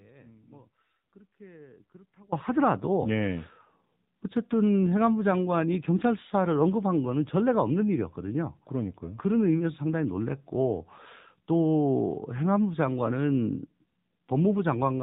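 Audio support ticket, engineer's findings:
Audio dropout to a faint residue, 0.00 to 2.32 s, already under way at the start. Only faint sound remains, about 25 dB below normal level. Abrupt return at 2.32 s. Likely an upstream signal loss with the downstream path still live.

AMR narrowband mobile codec, whole clip. Nothing above 4 kHz. Buzzy, synthetic speech texture, plainly audible. A vocal-tract model plus a few pulses per subframe replaces the real waveform. Damage level fits the AMR-NB 7.4 kbps mode.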